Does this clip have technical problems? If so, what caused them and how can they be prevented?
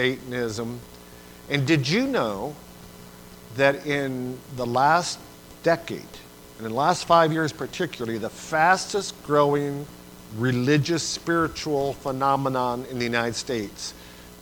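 Yes, there's a single sharp click at 8.93 s, likely dropped samples: a tiny fraction of a millisecond went missing, so the waveform jumps abruptly. Keeping buffers generous and the system unloaded while recording should prevent it.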